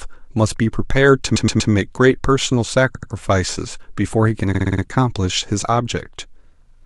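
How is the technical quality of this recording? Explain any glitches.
The recording has three stutters from repeated frames, at 1.35–1.71 s, 2.95–3.11 s and 4.53–4.82 s, where short blocks of about 109, 89 and 48 ms replay 3, 2 and 5 extra times, lengthening the speech.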